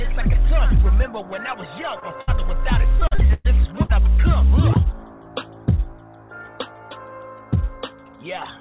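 The audio runs over a call path whose sound stops at 4 kHz, which fits narrowband G.711 A-law at 64 kbps. A short concealed packet loss at 2.00 to 2.03 s drops about 20 ms of audio before it reaches the decoder. The receiver patches the hole by extending the preceding sound for about 12 ms and then blending back into the real signal, leaving a brief smear or wobble where a small piece of sound is lost. A burst of packet loss follows at 2.21 to 2.29 s, and another at 3.83 to 3.92 s. In each, about 60 ms of consecutive audio never arrives in time. The decoder continues the last sound for roughly 65 ms while fading it, so the gap is heard as a held buzz or dying hiss, and the audio picks up further along with the missing stretch gone. The second burst also shortens the timeline by about 2 ms. Between 2.99 and 3.47 s, repeated packet loss gives a robotic sound. Six separate gaps remove about 220 ms in total, the longest about 112 ms. 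Each hole is filled by extending the previous sound, and the next loss follows soon after, so roughly half of that half-second is synthetic. The result is choppy audio with chunks missing.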